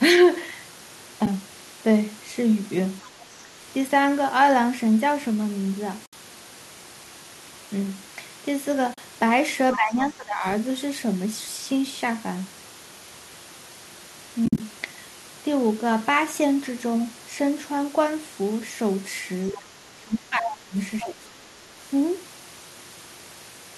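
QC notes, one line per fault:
1.26 to 14.60 s, AAC frame loss with muting: Short soft-edged holes at 1.26 s (10 ms), 6.06 to 6.13 s (70 ms), 8.94 to 8.98 s (40 ms), and 14.46 to 14.60 s (100 ms scattered over 140 ms, longest run about 50 ms). The durations fit lost 10 ms frames zeroed by the decoder. Overlapping windows fade each gap out and in.
3.02 to 21.08 s, other side's voice leaking through: A second voice breaks in at 3.02 to 3.07 s at about 25 dB below the speech, at 20.46 to 20.52 s at about 5 dB below, and at 20.99 to 21.08 s at about 10 dB below. It is likely loudspeaker echo that the canceller left behind.
9.76 to 21.29 s, speech suppressed in double talk: The main speech dips while the far side talks. This happens at 9.76 to 10.44 s (about 15 dB deep, roughly 0.7 s), 19.52 to 20.76 s (about 25 dB, roughly 1.5 s), and 21.03 to 21.29 s (about 15 dB, roughly 0.3 s). The likely cause is an echo canceller ducking both sides at once.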